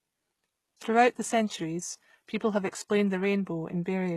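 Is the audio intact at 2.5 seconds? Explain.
No. At 2.5 seconds, as throughout the clip, the speech carries plainly audible damage, likely from HE-AAC compression at a rate near 16 kbps. Its treble is rebuilt from copied lower bands, so s sounds turn gritty and metallic. A spectrogram shows blocky, repeated texture up to a hard ceiling near 12.3 kHz.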